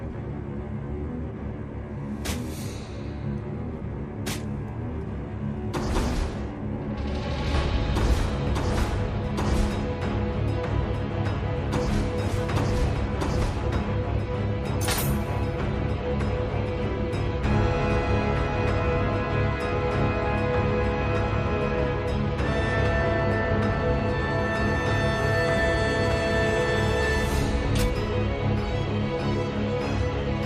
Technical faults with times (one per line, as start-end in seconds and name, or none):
none